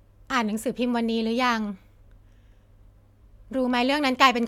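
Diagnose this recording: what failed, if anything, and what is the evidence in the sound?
Nothing failed here; no stage of the chain leaves an audible trace of a fault anywhere in the recording. The speech runs continuous and intact, with no event that calls for a diagnosis.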